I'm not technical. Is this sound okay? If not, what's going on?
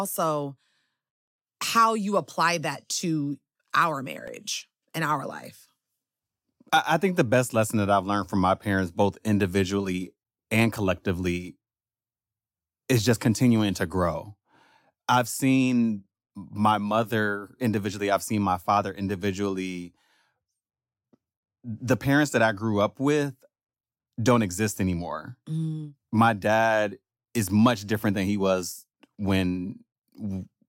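No. At 4.28 s, just after "apply that to our", there is a single tiny click. This is a repeated buffer: the next slice of audio didn't reach the playback device in time, so it replayed the slice it had just used. That slice lasted about 1.3 ms, which fits a 64-sample buffer, and it played one extra time. Such a short repeat is too brief to sound like a stutter, so the hard joins are heard as a click, with roughly a millisecond or two of audio displaced.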